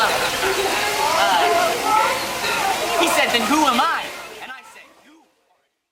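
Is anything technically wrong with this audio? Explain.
No, nothing here points to a technical problem. The smooth fade out, starting around three and a half seconds in, lowers the level gradually to the end with no click or hard edge, as an editor would shape it.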